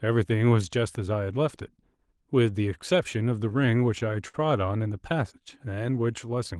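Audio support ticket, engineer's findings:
Repeated stalls (stutter), 3.49 to 4.36 s: five short hangs, longest 57 ms, about 95 ms of held-over sound in total, roughly a tenth of that stretch. Nothing audibly lost, but the audio drags and hiccups. Jitter buffer underrun: packets arrived late or too slowly, so the buffer kept running dry and the receiver stretched the last sound until data resumed.

Jitter buffer slow-down, 5.40 to 6.36 s: playback drops to about 91% speed with pitch unchanged, sounds drawn out, 95 ms added overall. The receiver was rebuilding its reserve, with the buffer low or its target delay raised, by repeating single pitch periods and pause fragments in a row. Call path is Opus, band-limited near 12 kHz, consistent with roughly 24 kbps.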